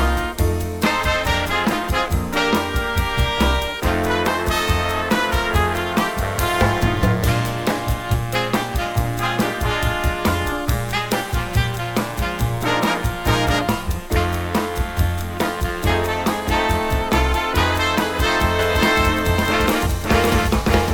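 From 18.59 s to the end, everything sounds twice: a full-band copy, about as loud as the original, trails it by roughly half a second, starting abruptly with no decay or room colour. This doubled audio track likely comes from a slower second capture path or misaligned edit.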